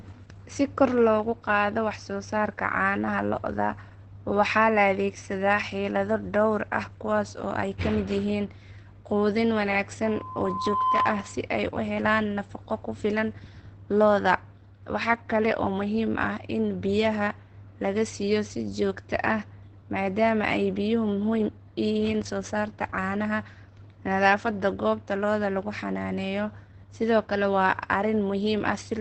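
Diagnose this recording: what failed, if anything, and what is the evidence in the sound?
At the codec stage, the speech is muffled and hoarse with nothing above 8.6 kHz, likely Opus compression in its speech mode at a rate around 12 kbps.

In the acoustic path, a loudspeaker feedback squeal appears from 10.05 to 11.46 s. Looped gain lets a 1 kHz tone swell over about a second to roughly 5 dB above the speech.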